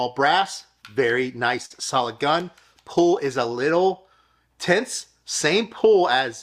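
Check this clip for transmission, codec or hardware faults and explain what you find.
There's one fault: a short stall from a late packet at 1.65 to 1.72 s. A packet arrived late and the jitter buffer ran dry, so the receiver stretched the last sound for about 48 ms, then carried on where it left off. Nothing's lost, just a held sound with a slight buzz or dip, and everything after runs 48 ms later.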